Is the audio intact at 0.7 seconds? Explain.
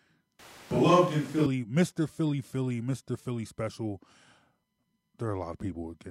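No. At 0.7 seconds the speech is inside a switch to a distant microphone, running from about 0.40 to 1.46 s. The sound turns suddenly roomy and hollow, with thinner bass. The level stays about the same, but background noise rises to roughly 25 dB below the speech. The cause is likely that the close microphone dropped out and a farther one picked up the room instead. The close sound returns just as abruptly.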